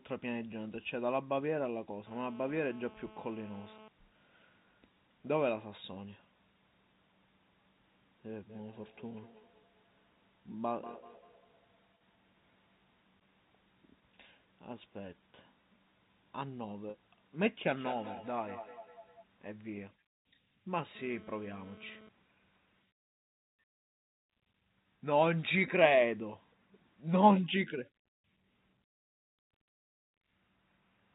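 Speech over a telephone-band G.711 line, with nothing above 4 kHz, carries three kinds of fault. GSM phone buzz, a hard, raspy 217 Hz drone full of harmonics at about 21 dB below the speech, runs steadily from 2.07 to 3.88 s, when a nearby 2G handset is in a call. It returns in intermittent bursts from 20.95 to 22.09 s, during a data transfer. The pitch and rasp set it apart from smooth 50 or 60 Hz mains hum. Feedback echo between two devices appears from 8.49 to 13.09 s, at up to about 24 dB below the speech, and again from 17.65 to 19.25 s, where it is much stronger at about 12 dB below. A second device in the room replays the call into the first microphone, so each phrase comes back as distinct, thinning, ringing copies roughly a fifth of a second apart, unlike the smooth decay of room reverberation. Packet loss with pitch repetition occurs at 16.90 s. About 40 ms of audio is missing, which fits two lost packets, and the receiver fills it by repeating the last pitch cycle. 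The result is a brief held, buzzy note rather than the silence or click of a plain dropout.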